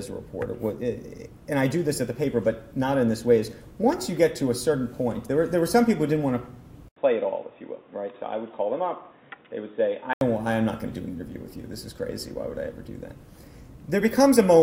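At 6.88 s input likely switched to a poorer device; after an 80 ms dropout, sound turns dull, capped at 3.8 kHz, until 10.21 s.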